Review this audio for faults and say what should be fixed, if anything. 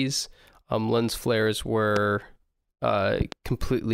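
Loud pop at 1.96–1.99 s after "lens flares", then a double pop at 3.21–3.35 s, each about 15 dB above the speech; likely a voltage spike from switching, static or a driver glitch. To prevent it, secure connectors, avoid switching or plugging equipment during recording, and ground the setup against static discharge.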